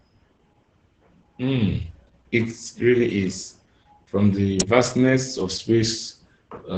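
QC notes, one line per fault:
throughout: Opus voice compression. Heavy SILK-style coding leaves speech muffled and hoarse, which fits roughly 10 kbps; the spectrogram shows a flat ceiling near 8.8 kHz.
4.60 s: electrical switching spike. A sharp snap added on top of the speech, likely a nearby switch arcing; a thin vertical spike on the waveform, broadband on the spectrogram.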